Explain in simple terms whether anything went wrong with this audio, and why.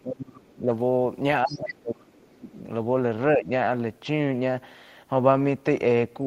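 The echo canceller likely mistook overlapping talk for echo and turned everything down. This is speech suppressed in double talk: the speech sinks deeply from 0.02 to 0.69 s and 1.45 to 2.5 s, and dips slightly at 3.36 to 3.5 s. The canceller also likely failed to remove the other side's voice leaking through from the loudspeaker, so a faint second voice is heard from 1.47 to 1.73 s.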